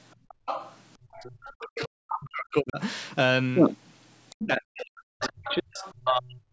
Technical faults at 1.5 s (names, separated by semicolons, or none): speech suppressed in double talk; other side's voice leaking through